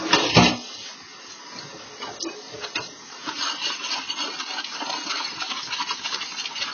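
From start to finish the sound is dull, with nothing above 6.5 kHz, and sustained or noisy parts carry a warbling, fizzy smear. The likely cause is heavy AAC compression: an AAC-LC encoder short of bits lowers its cut-off and quantises the remaining frequency lines so coarsely that bands drop out or get patched with substitute noise, which fits a bitrate around 16 kbps.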